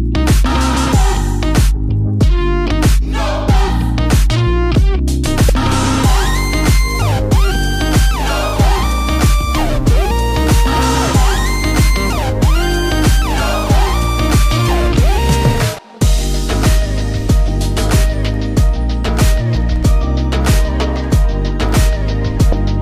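At 5.49 s, again from 15.75 to 15.79 s, and at 22.49 to 22.53 s, the sound breaks into a brief chirp, squawk, click or short hole, the mark of damaged data in a compressed stream. Corrupted bytes made the decoder misread those frames and lose sync until it found the next valid frame header. Each burst lasts a few hundredths of a second at most.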